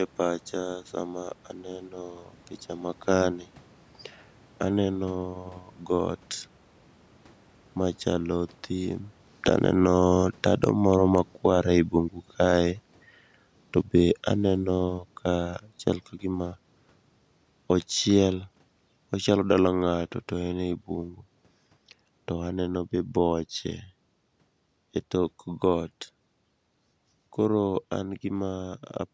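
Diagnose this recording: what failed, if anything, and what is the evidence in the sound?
From 7.78 s to 28.57 s the sound sinks steadily by about 18 dB, the room noise dropping right along with it, which marks automatic gain falling in the call processing: the gain control judged the input too loud or its background noise too strong and eased its gain down gradually.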